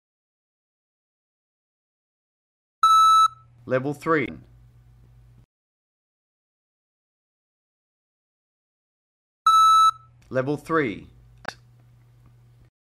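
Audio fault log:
4.25–4.29 s and 11.46–11.49 s: damaged data in a compressed stream. Two brief faults, about 44 ms and 38 ms long, each heard as a short chirp or blip breaking into the sound. At these points the compressed data is corrupted, so the decoder cannot read those frames correctly, loses frame sync and has to find the next valid frame header before normal playback resumes. The brief garbled output during that search produces the blip.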